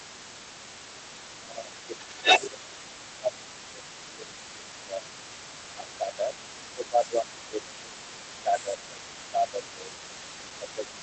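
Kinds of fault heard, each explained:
Other side's voice leaking through: A second, fainter voice runs under the main talker for the entire clip, sitting somewhere around 15 dB below it. It's quiet but it never goes away. The likely culprit is the far end playing out of the talker's loudspeaker and getting back into the mic, with the echo canceller only partly scrubbing it out, so a residue of the other party rides along the whole time.
Speech suppressed in double talk: The main talker's level sags in four stretches: 1.4 to 2.85 s, 3.2 to 6.37 s, 6.75 to 7.94 s, and from 8.44 s to the end. The first two dip by up to about 15 dB and the last two by about 10 dB. That pattern likely comes from both sides talking at once, with the canceller unable to tell the near voice from the echo and pulling everything down together.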